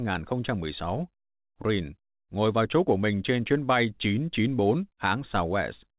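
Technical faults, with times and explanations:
No technical faults heard.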